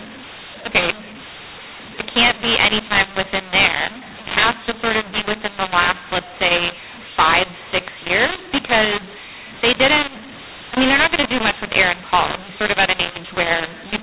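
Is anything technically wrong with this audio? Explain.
Yes. Throughout the speech there is a mu-law and A-law mix-up. The audio was coded as A-law telephone audio, and the A-law coding itself passes at 8 kHz with nothing above 4 kHz. But it was then decoded as mu-law. The two laws map their 8-bit codes to different levels. So each sample comes back at the wrong size, some too loud, some too quiet. The quietest samples rise well above silence. The speech sounds harsh and distorted, and the pauses fill with noise.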